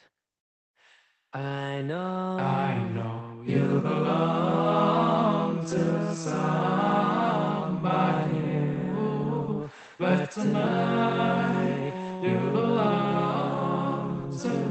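No technical faults can be heard anywhere in this recording.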